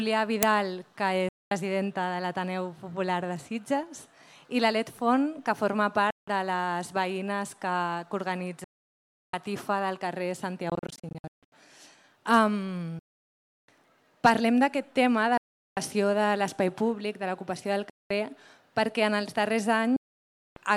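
At 0.43 s an uninitialised buffer is played before any audio has been written into it, so stale memory goes out as samples. The result is a brief, loud crack lasting about 3 ms, which fits a 128-sample block.

From 1.29 s onward, packets on what is likely a Bluetooth link miss their deadline and are discarded, producing a Bluetooth dropout each time. The output falls silent with abrupt edges or a fade of a few milliseconds and then resumes further along, as though the audio had kept running underneath. The gaps are at 1.29 s (0.22 s), 6.10 s (0.17 s), 8.64 s (0.69 s), 12.99 s (0.69 s), 15.37 s (0.39 s), 17.90 s (0.21 s) and 19.96 s (0.60 s). Between 10.70 and 11.52 s the losses break into scattered holes totalling about 0.49 s, the longest 0.15 s, which gives a stuttering effect.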